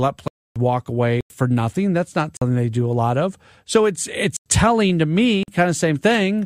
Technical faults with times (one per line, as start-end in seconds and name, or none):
0.28-0.56 block of digital silence
1.21-1.30 block of digital silence
2.37-2.41 block of digital silence
4.37-4.46 block of digital silence
5.43-5.48 block of digital silence